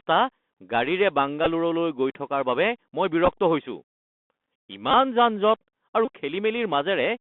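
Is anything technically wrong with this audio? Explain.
Yes. There are two faults.

A Bluetooth CVSD headset codec colours the whole clip. The speech passes only from about 200 Hz to 3.5 kHz. Nothing above that survives, so the sound is dull and narrow. CVSD sends one bit per sample at 64 kbps, each bit saying only up or down. Its adaptive step cannot keep pace with loud, bright sounds. The damage is plainly audible. Sibilants turn scratchy, and a granular hiss runs under the speech.

Bluetooth headset packet repeated occurs four times. The first is at 1.44 to 1.47 s, losing 15 ms. The second is at 3.25 to 3.28 s, with 15 ms lost across a 30 ms span and the longest run about 7 ms. The third is at 4.91 to 4.94 s, losing 22.5 ms. The last is at 6.05 to 6.10 s, with 48.8 ms lost across 75 ms and runs up to about 20 ms. Each lost packet is replaced by replaying the previous one. A 3.75 ms repeat cycle gives a brief buzz near 267 Hz. 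The longer runs buzz most clearly.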